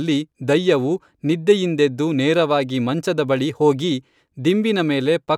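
Nothing in the speech stood out as a technical fault on listening.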